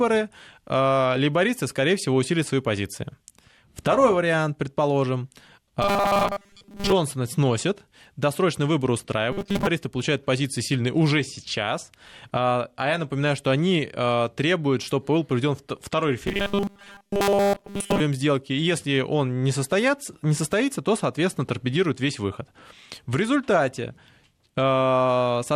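From 5.82 to 6.92 s, after "вариант предположим", again from 9.32 to 9.68 s, and from 16.27 to 18.00 s, after "чтобы был проведен второй", the speech becomes a rigid metallic buzz at 200 Hz: robotic sound, likely from repeating a 5 ms buffer while most of the real audio is skipped.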